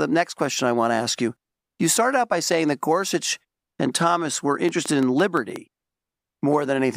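From 4.69 to 5.57 s, a train of clicks cuts across the speech. Around seven sharp pulses arrive at a steady 5.7 per second. Each has much the same shape. They peak roughly 10 dB above the speech, so they stand out clearly. They sound like a regular ticking laid over the talker. The cause is likely interference from nearby equipment or a faulty connection or power supply, which injects a repeated pulse into the signal.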